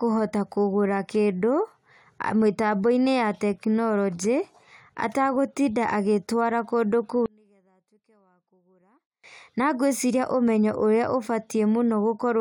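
One channel inverted, from 7.26 to 9.24 s: across this stretch the speech drops by about 37 dB when the stereo pair is heard summed to mono, leaving only a faint trace before full level returns. The likely cause is one channel's polarity flipping, so the centred voice content shared by left and right cancels itself in the sum, and what remains is just the small difference between the two channels.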